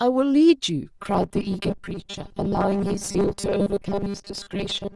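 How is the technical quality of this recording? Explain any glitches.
The recording degrades badly after its first second. From 0.99 s to the end at 4.96 s the speech carries robotic sound from repeated short buffers, a rigid metallic buzz fixed at 200 Hz, most likely from 5 ms chunks replayed while most real audio is skipped. Unlike a pitch shift, the buzz stays at one frequency regardless of the speaker's intonation.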